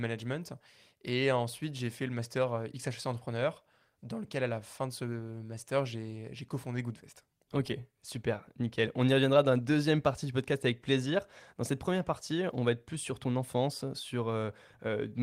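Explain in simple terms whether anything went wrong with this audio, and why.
Nothing seems to have gone wrong with this bit of speech, so there's no technical problem to point to anywhere in it.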